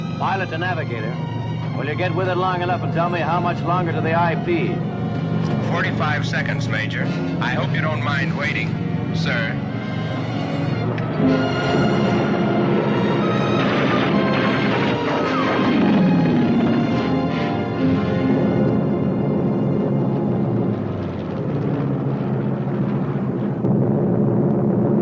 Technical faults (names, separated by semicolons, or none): none